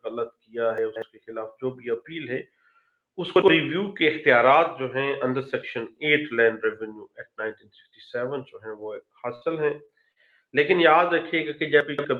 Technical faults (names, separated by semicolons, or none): chunks out of order; sound cut by the noise suppressor; burst of packet loss; short stall from a late packet; short concealed packet loss